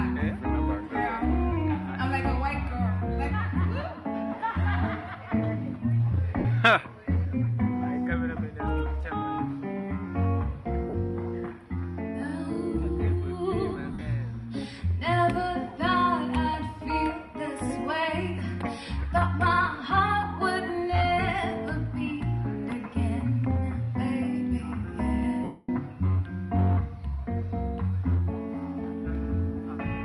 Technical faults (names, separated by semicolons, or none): lost LE Audio frames